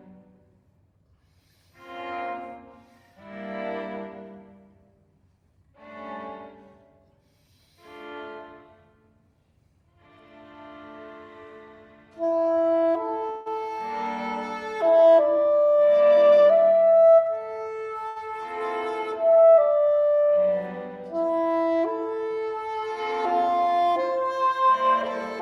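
At 13.29 s the sound freezes for about 164 ms into a fading buzz or hiss before carrying on unchanged; that's a call audio freeze, likely packets held up so the jitter buffer ran dry. From 15.37 to 16.45 s there's a jitter buffer speed-up: tiny pitch-period chunks get trimmed, roughly 150 ms in total, so things run about 12% faster at the same pitch. Then at 18.08 s a short stall from a late packet stretches one sound by 77 ms with a slight buzz or dip, then resumes from the same spot.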